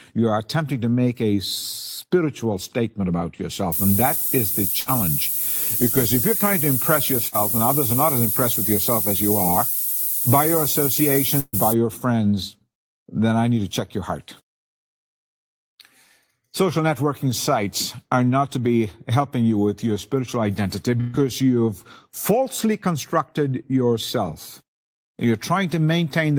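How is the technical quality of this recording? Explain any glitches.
The technical quality is poor, with two kinds of fault in this speech recording.

Low bit depth with noise shaping runs from 3.72 to 11.73 s. The signal appears reduced to about 4 bits, and the rounding error is pushed upward in frequency. The result is a thin, steady hiss, roughly as loud as the speech, rising sharply toward the treble.

A burst of packet loss occurs at 4.80, 7.27, 11.40 and 21.00 s. Each time, the receiver extends the last sound for 61 to 134 ms, fading it into a buzz or hiss. Speech then resumes with 60 to 140 ms missing. At 11.40 s a brief silence follows the fill.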